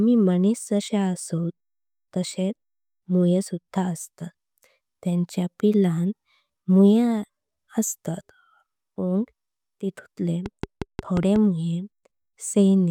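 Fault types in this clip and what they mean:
Train of clicks: likely interference or a faulty connection injecting a repeated pulse, heard as around seven evenly spaced ticks, 5.55 per second, from 10.46 to 11.37 s, standing well above the speech.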